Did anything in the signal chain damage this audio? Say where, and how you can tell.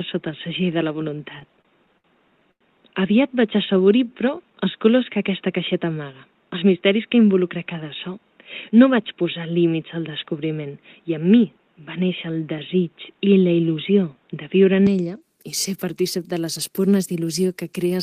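Yes. Input switched to a poorer device, 0 to 14.87 s, at the capture stage: the band narrows with new noise about 45 dB down, likely from a narrower microphone or headset profile.

Repeated stalls (stutter), 1.39 to 2.62 s, in the network and jitter buffer: eight gaps, the longest 94 ms, bridged by repeating sound, dragging the audio.

Jitter buffer slow-down, 3.49 to 4.54 s: the receiver repeated pitch periods, adding 108 ms, so the audio plays at 90% speed without a pitch change.

Jitter buffer speed-up, 6.51 to 7.07 s: the buffer trimmed roughly 70 ms of short pitch-period pieces, so the audio runs at 112% speed, audibly hurried.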